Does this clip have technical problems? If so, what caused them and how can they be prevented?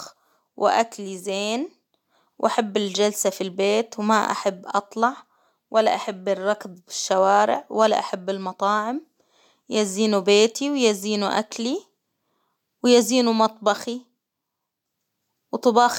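No, nothing in this speech recording stood out as a technical problem on listening, so there is nothing here that needs preventing.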